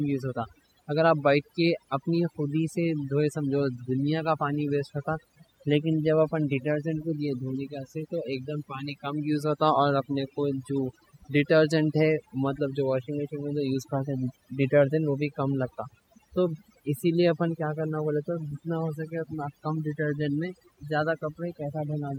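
Throughout, the speech sits over near-silent background with twinkling specks: overdone noise removal, where aggressive reduction gated quiet frequency bands, voice detail included.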